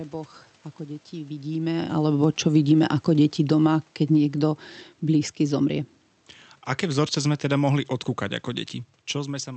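From 2.22 s to 5.89 s there's automatic gain falling. The AGC judged the input too loud, or its background noise too strong, and eased its gain down by about 6 dB, so the voice and the room noise sink together, unlike the talker shifting position around 1.5 s.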